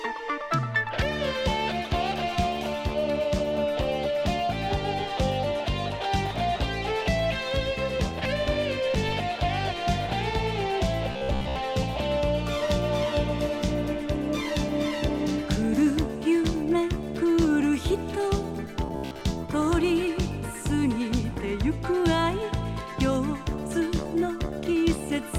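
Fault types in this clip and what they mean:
Robotic sound from repeated short buffers: From 11.12 to 11.56 s and 18.86 to 19.22 s, the sound becomes a rigid metallic buzz at 66.8 Hz. Most of it repeats one slice. New audio likely arrived too seldom, so a 15 ms chunk kept looping.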